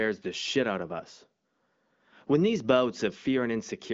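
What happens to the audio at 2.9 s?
Nothing goes wrong at 2.9 s; the speech there is intact, carried through an AMR wideband (HD Voice) path with its band limit near 7.6 kHz.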